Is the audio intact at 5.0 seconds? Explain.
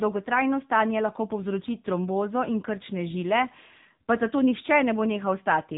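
No. The speech passed through the AMR narrowband mobile codec for the whole clip, including 5.0 s. Its coarse vocal-tract modelling, fitting a low bitrate near 8 kbps, leaves the voice buzzy and synthetic, with nothing above 3.8 kHz.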